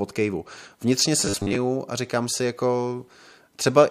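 From 1.20 to 1.57 s, just before "a říkám si", the speech becomes a rigid metallic buzz at 100 Hz that loosely follows the words. This is robotic sound from repeated short buffers, likely 10 ms chunks looped for about half that stretch. Unlike dropouts, nothing goes silent.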